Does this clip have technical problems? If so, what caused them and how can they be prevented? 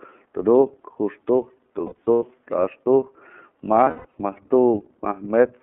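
Yes. The whole speech clip runs through the iLBC codec, and the damage is plainly audible: the band is cut to roughly 200 Hz to 3.5 kHz, and the sound has that slightly rough, synthetic edge. The 30 ms frames and the character of the coding point to iLBC's 13.33 kbps mode. Each frame's excitation is coded on its own, so the voice stays intelligible, but detail above 3.5 kHz simply isn't there. To avoid it, negotiate a wideband codec such as Opus or G.722 instead.

There are also lost iLBC frames in two bursts: from 1.86 to 2.23 s, with about 210 ms missing spread over 360 ms, and from 3.84 to 4.14 s, with 210 ms missing over 300 ms. The longest run in the first burst is about a tenth of a second, and in the second a bit longer. In those gaps the decoder repeats the last pitch cycle with added noise, so you hear a held, buzzy vowel. Because iLBC frames don't depend on one another, the voice recovers almost at once. 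Better network quality of service, a larger jitter buffer, or forward error correction would prevent it.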